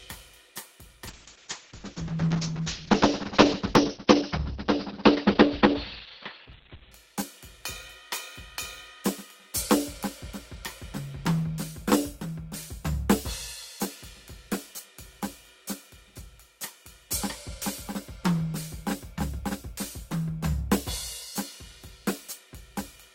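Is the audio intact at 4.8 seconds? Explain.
No. From 1.09 to 6.97 s a call bitrate drop takes the encoder from 40 to 7 kbps, so the music turns coarse and watery and its top end shrinks from 20 kHz to 4 kHz. Unlike packet loss, the sound never drops out.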